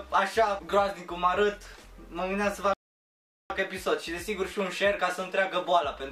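At 2.74 s the audio just drops to silence and sits there until 3.50 s, then picks up exactly where it left off. That's a rebuffering stall: the player ran dry of downloaded data and waited for more, so nothing's missing, but about 0.77 s of dead air gets added.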